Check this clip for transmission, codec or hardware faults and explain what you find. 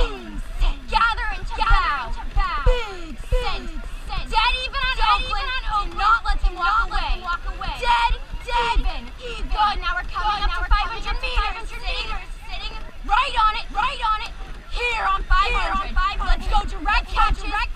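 One fault runs through the whole clip, a doubled audio track. A second full-band copy trails roughly 0.7 s behind, around 5 dB quieter, with no decay. Likely cause: a second capture through a slower path.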